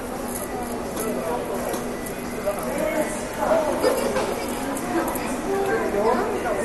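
All the way through, the sound is dull, with nothing above 12.2 kHz and a gurgling, granular grit, likely MP2 compression starved of bits, around 64 kbps by the sound of it.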